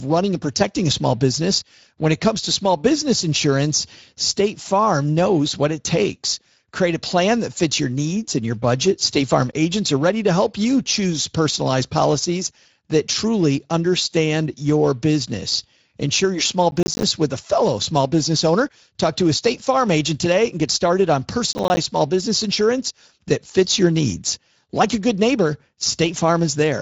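Speex codec damage runs through the whole speech clip. This CELP coder has too few bits to describe the excitation, so the speech comes out audibly grainy and hoarse. Nothing is present above 7.7 kHz, and the sound points to a setting around 16.8 kbps.

Processor overload crackle occurs from 16.71 to 17.03 s and again from 21.53 to 21.77 s. Audio buffers of around ten milliseconds each missed their deadlines many times in a row, leaving hard-edged silent gaps. These are heard as a short burst of gritty crackle that stops once the load clears.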